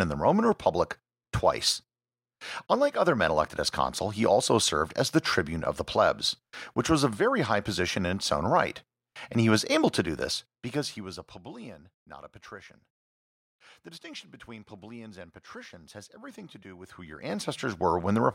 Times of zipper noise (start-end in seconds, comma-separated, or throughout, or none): 16.68-17.91